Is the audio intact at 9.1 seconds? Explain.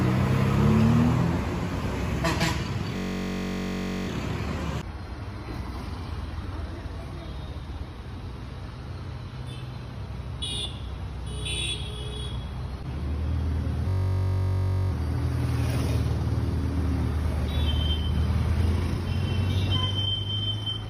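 Yes, the audio at 9.1 seconds is intact, with no dropout, glitch or other fault at that point.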